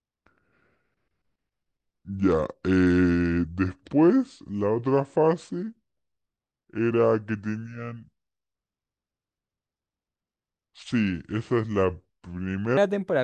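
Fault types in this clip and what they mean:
Wrong sample rate: the speech plays slowed to about 0.73 of its proper speed and lowered by about 5.5 semitones, deep and sluggish, from 0 to 12.77 s, which fits 44.1 kHz material played back at 32 kHz with no conversion. On a spectrogram, harmonics and formants sit proportionally lower and every syllable is stretched in time, with the top of the band compressed to 16 kHz. The waveform looks horizontally drawn out.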